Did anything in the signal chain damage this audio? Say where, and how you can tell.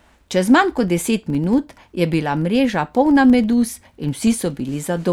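Yes. A steady ticking buzz at about 21.5 Hz runs under the speech for the whole clip, louder as the speech gets louder. That points to a filter restarted on every block: its state is cleared each time, so every block, fitting a 2048-sample buffer, starts with a small transient.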